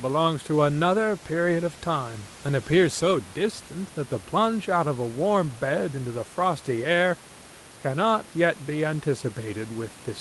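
No technical faults are audible.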